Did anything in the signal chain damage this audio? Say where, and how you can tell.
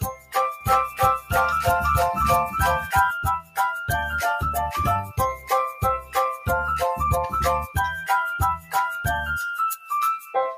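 Yes. The damage is at the call-processing stage: a noise suppressor built for speech was left running on music or other sounds. Throughout the clip, held tones and decaying tails keep sinking by around 5 dB while attacks pass through, so the level pumps and the sound thins. A level change in the source would follow the music's phrasing. This one tracks how steady the sound is, which points to the suppressor rather than the performance.

The heaviest cuts by the noise suppressor fall at 0.00 to 0.36 s (deepest about 16 dB), 3.39 to 3.58 s (about 15 dB), 8.58 to 8.74 s (about 10 dB) and 10.20 to 10.35 s (about 9 dB). Each is a brief dip lasting a few hundred milliseconds or less, where sustained material is judged to be noise and pulled down hard. A dropout would remove everything. Here transients survive and only the steady or fading parts collapse.

From 0.61 to 3.11 s there is a doubled audio track: a full-band copy of the sound, about as loud as the original, runs roughly 0.4 s behind it and starts and stops abruptly. 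It is likely caused by a second, slower capture path or a misaligned edit. An acoustic echo or reverb would be quieter, darker and smeared. This copy is a dry, exact duplicate with no room colour.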